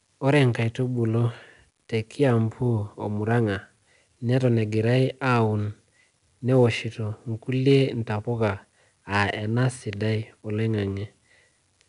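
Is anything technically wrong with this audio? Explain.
Yes, there's 4-bit ADPCM compression damage running through the whole speech clip, and it's plainly audible. ADPCM keeps each sample only as a coarse 4-bit step away from a predicted value, with the step size adapting as it goes, so the error rides along with the signal level. You hear it as a gritty hiss on the louder syllables and roughness on sharp onsets. Nothing sits above about 10.6 kHz, which fits a rate of about 88 kbps.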